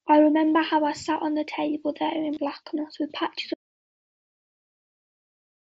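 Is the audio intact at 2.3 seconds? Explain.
No. From 2.34 to 2.37 s there is concealed Bluetooth headset packet loss: about 22.5 ms of the headset's stream never arrived, which fits three lost frames in a row. The phone filled the gap by repeating the best-matching slice of the waveform just before it, so instead of silence you hear a brief buzzy tone held at full level, then a slight warble as real sound resumes. A plain dropout would go quiet; this stays loud and periodic.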